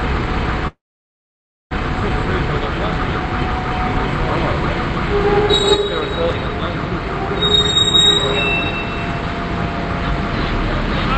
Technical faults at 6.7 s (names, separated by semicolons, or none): none